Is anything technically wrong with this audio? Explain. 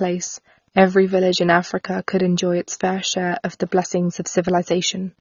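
Yes. Throughout, the speech has nothing above 7 kHz and sounds dull and smeared, with fizzy, warbling sibilants. This likely comes from AAC compression at a low bitrate, near 24 kbps, which drops the top band and coarsely quantises the rest. The fizz distinguishes it from a plain low-pass filter.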